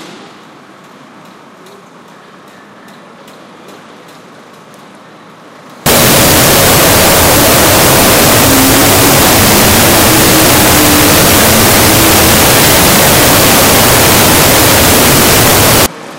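From 5.86 to 15.86 s, a wrong sample width fault. The sound plays at half speed under loud noise, which suggests 16-bit data read as 8-bit bytes.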